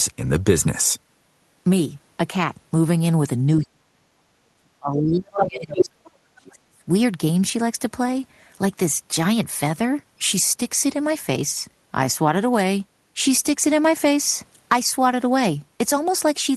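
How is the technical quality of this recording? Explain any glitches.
The recording has clear faults in the middle, between 3.56 and 6.83 s, where the talker's speech repeatedly collapses and a second voice briefly intrudes. It has passed through a call codec, and its spectrum tops out near 12 kHz.

Speech suppressed in double talk, at 3.56–4.12, 4.48–6.15 and 6.35–6.83 s: the talker drops sharply, by around 35 to 40 dB. This is likely because both sides spoke at once, and the echo canceller muted everything. On a waveform, the envelope caves in. On a spectrogram, the harmonics fade to near-blank.

Other side's voice leaking through, at 5.39–5.47 and 5.79–5.85 s: short scraps of a second voice appear, about as loud as the talker and then about 5 dB louder. This is likely residual loudspeaker echo that the canceller missed. They show as brief, isolated energy bursts inside the suppressed gap.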